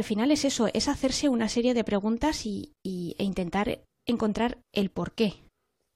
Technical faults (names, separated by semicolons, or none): gap between stream segments